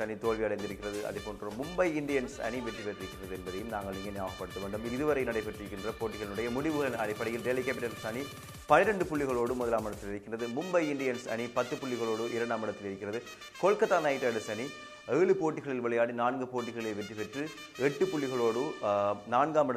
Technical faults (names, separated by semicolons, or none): none